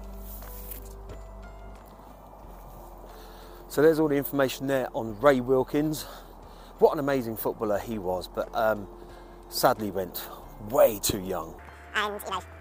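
From 11.59 s to 12.61 s, a section at the wrong speed runs at double rate, pitch jumping about 10 semitones, likely from resampling against a mismatched clock.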